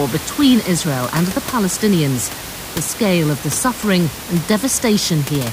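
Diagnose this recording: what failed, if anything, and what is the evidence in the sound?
Nothing in the chain seems to have failed here: the speech comes through intact, with just the room's own background noise sitting about 12 dB underneath it, and that's simply part of the recording.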